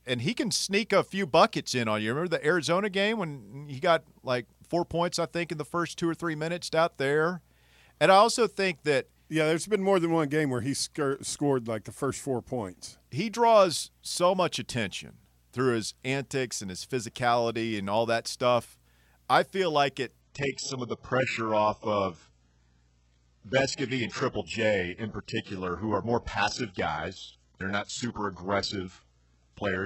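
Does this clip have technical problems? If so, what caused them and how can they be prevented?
Yes. Right after "I feel like it", at 20.21 s, the speech abruptly turns dull, with nothing audible above 8 kHz and codec artefacts rising through to the end, with no gap at the switch. This is an adaptive stream at a lower bitrate: the connection slowed, so the player swapped mid-stream to a far leaner encoding, which points to a drop from AAC-LC near 96 kbit/s to HE-AAC around 8 kbit/s. A steadier, faster connection or a higher minimum bitrate in the player's adaptation settings would prevent it.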